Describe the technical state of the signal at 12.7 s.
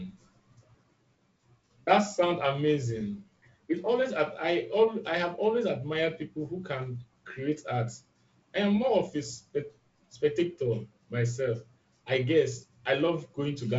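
At 12.7 s the speech is intact, carried through G.722 wideband telephone coding at what sounds like 48 kbit/s, with content reaching to about 7.7 kHz and nothing above it.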